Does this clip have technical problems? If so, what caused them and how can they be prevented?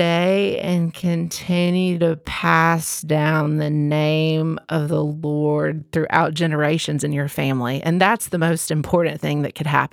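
Yes. A time-stretched section runs from 0.0 to 5.94 s: the speech plays at about half speed (0.504×) with pitch unchanged, dragging until normal pace resumes at "throughout generations in your". Software likely lengthened it by repeating short slices. To prevent this, fit timing by editing or re-recording rather than stretching, and keep any stretch ratio close to 1.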